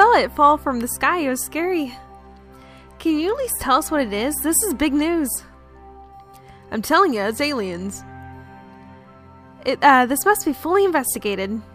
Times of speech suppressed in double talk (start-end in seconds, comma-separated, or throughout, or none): none